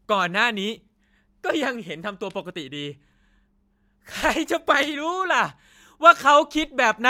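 Speech recording, with no technical faults audible anywhere.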